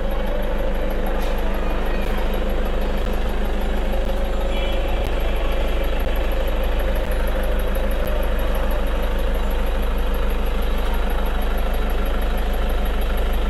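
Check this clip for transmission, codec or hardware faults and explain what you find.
One fault is present. Periodic USB or driver dropouts occur from 2.05 to 8.06 s, once per second: a recurring bus or driver stall replaces around 10 ms with silence about seven times, heard as evenly spaced ticks.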